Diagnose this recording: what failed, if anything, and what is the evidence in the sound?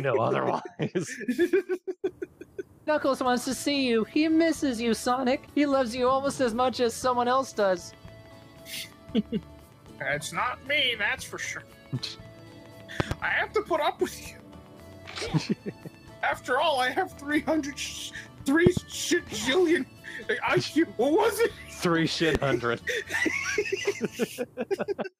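Loud pops at 13.00–13.14 s and 18.67–18.79 s (each a double pop) and a single pop at 22.35–22.38 s, peaking roughly 20 dB above the continuing sound. These are likely voltage steps from a plug, switch or static in the analogue wiring.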